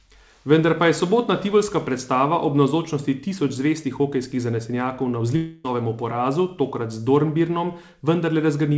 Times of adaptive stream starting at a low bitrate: none

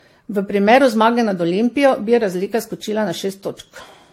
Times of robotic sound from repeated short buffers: none

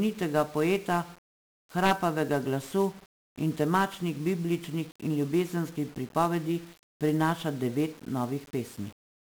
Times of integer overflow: 1.85-1.92

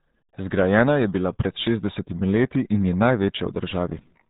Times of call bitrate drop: none

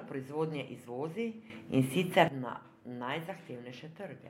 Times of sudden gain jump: 1.50-2.28

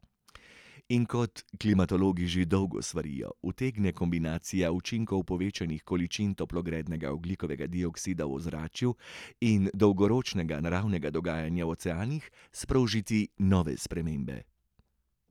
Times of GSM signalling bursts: none

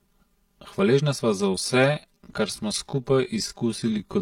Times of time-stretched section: 1.22-4.22

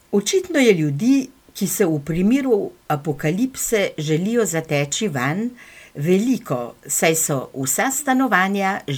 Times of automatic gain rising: none

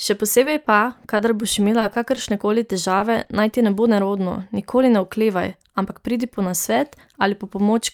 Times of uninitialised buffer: none

